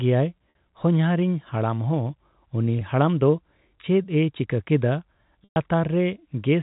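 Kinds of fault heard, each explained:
Packet loss with pitch repetition: short gaps at 0.5, 2.79 and 5.44 s are bridged by repeating the last pitch period, so the first two sound held and slightly buzzy, while the 120 ms gap near 5.5 s fades toward silence; spectrograms show frozen harmonics and the waveform shows identical repeating cycles.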